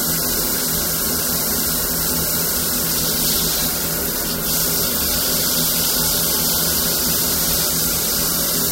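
A stage in the chain is being driven about 5 dB beyond what it can pass, so for the whole of the clip the tallest peaks of these sounds are sheared off flat. This is hard clipping. Only a small fraction of the waveform, a few samples in every thousand, actually reaches the ceiling, so the damage sits on the loudest transients: each one picks up a brief, bright crackle from the high harmonics that the flattened tops create.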